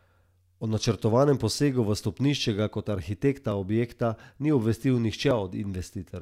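At 3.52 s, just after "v stopnišče ga kot", and at 5.31 s, the speech skips ahead, likely a dropped buffer (overrun). A millisecond or two, then a few milliseconds, vanish with no silent gap.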